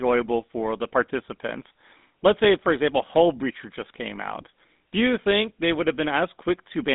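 GSM full-rate codec damage runs throughout the speech, plainly audible as a buzzy, gravelly roughness. The voice is rebuilt from a vocal-tract model driven by sparse regular pulses, which fits a 13 kbit/s coder. The band sits at about 200 Hz to 3.7 kHz, with nothing above 3.8 kHz.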